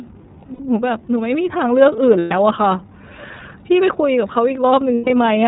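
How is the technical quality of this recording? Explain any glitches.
The technical quality is limited. The speech has passed through a low-bitrate voice codec, and it drops out briefly three times.

The iLBC codec colours the whole clip. Its damage is plainly audible. The band stops at 4 kHz, so the speech sounds muffled and telephone-like. Each frame's excitation is coded on its own, with no help from the one before. That leaves a slightly rough, synthetic edge on the speech. The sound fits the 13.33 kbps mode with 30 ms frames.

Lost iLBC frames cause the three glitches. They occur at 0.54 to 0.60 s, at 2.19 to 2.33 s, and at 4.95 to 5.10 s. The first gap lasts 60 ms. The other two last 120 ms each, which fits two missing 30 ms frames in the first gap and four in each of the others. During each gap the decoder repeats the last pitch cycle mixed with noise. You hear a held, buzzy or breathy vowel, fading in the longer gaps. 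Because each frame stands alone, the speech recovers almost at once.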